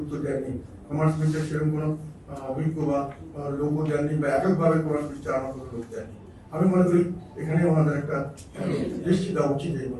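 No technical faults are audible anywhere in the clip.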